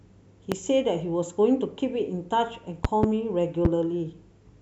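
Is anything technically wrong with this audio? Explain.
Yes. Loud pops occur at 0.52–0.55 s, 2.85–3.06 s (two in quick succession) and 3.65–3.68 s. Each is a sharp thump about 15 dB above the speech, which continues underneath, likely from a voltage step from a switch, plug or static. On the waveform each is a tall spike; on the spectrogram, a thin vertical broadband stripe.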